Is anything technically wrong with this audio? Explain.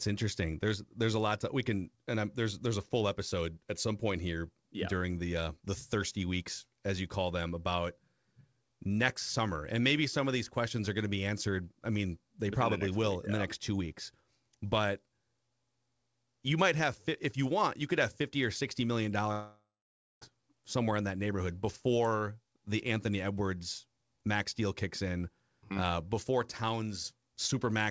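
Yes. From 19.32 to 20.23 s, a long network dropout likely stopped audio arriving. After "fifty or sixty million", the last sound fades into a buzz, then about 0.55 s of silence, before "somewhere in that neighborhood" returns with 0.9 s missing.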